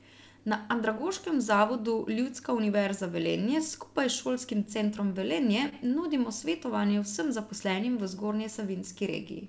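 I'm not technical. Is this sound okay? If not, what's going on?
No. This speech has clock drift between sender and receiver: the sending device's clock runs about 2 percent slow, so the receiving end keeps falling out of step.

To compensate, there are repeated timing corrections from 0.38 to 9.26 s. Tiny bits are repeated, stretching the audio by roughly a seventh of a second.

At 5.69 to 5.74 s there is a short stall from a late packet. One piece of the audio arrived late, so the receiver held the sound for 28 ms rather than going silent. Nothing is lost, but there is a brief drag.

The call connection itself cuts everything above 8 kHz, which is normal for this kind of call.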